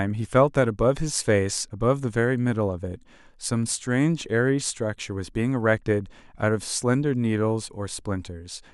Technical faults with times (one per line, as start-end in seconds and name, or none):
none